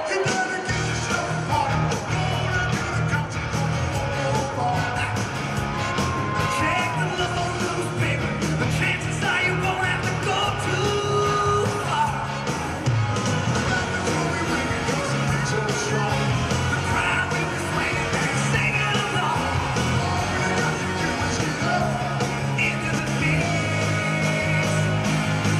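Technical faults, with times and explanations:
7.26–7.47 s, 18.15–18.27 s and 22.91–23.07 s, frames out of order: in each spot two neighbouring chunks of the stream got decoded back to front, so a short stretch plays with its halves swapped. Each half lasts about 104 ms, 52 ms and 78 ms, which fits runs of roughly four, two and three codec frames. You hear a quick garbled flutter, and no time goes missing.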